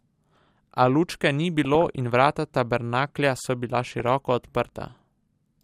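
A speech clip with two bursts of DAB burbling, from 1.65 to 2.00 s, ending just before "in vrata tabernaklja so", and from 3.72 to 4.07 s, starting right after "in vrata tabernaklja so". Weak reception lets a few bit errors per thousand slip past error correction into the MP2 data. Damaged samples put short blips of noise in single sub-bands, and damaged scale factors make sub-bands jump in level for up to a frame.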